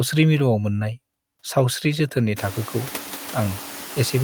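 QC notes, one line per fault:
Throughout, noise suppressor artifacts. The suppressor works on the audio in short frames, pulling down bands it judges to be steady noise. Here it takes off only about 1 dB, so its grip is very light. The room noise passes almost untouched. Around two and a half seconds that noise climbs by about 25 dB and then sits about 18 dB below the speech. That rise is the room itself, not the suppressor.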